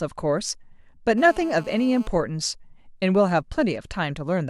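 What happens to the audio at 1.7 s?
GSM phone buzz runs from 1.18 to 2.07 s: a nearby 2G handset's 217 Hz transmit bursts get rectified, adding a raspy, harmonic-rich buzz about 22 dB below the speech.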